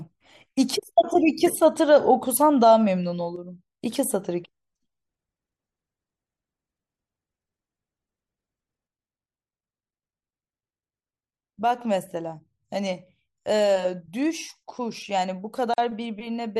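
At 3.36 s the level drops abruptly by about 6 dB and holds until 3.81 s. Then it jumps back. The same drop returns at 8.87 s and lasts to the end of the clip. The likely cause is one channel dropping out of a stereo source before a mono sum. Sound shared by both channels loses half its contribution. Anything present only in the missing channel vanishes entirely.

At 15.74 s a short silence of 43 ms opens in the speech. This is a gap at a join of encoded pieces. Two segments were encoded separately and spliced without trimming. The encoder's start-up delay and the padding of the final frame both remained. The edges are smeared by the codec. The speech resumes right where it broke off.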